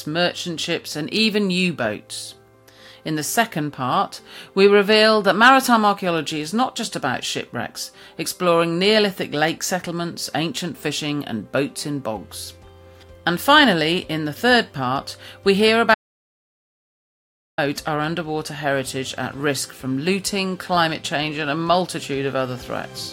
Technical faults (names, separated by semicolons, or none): audio dropout to silence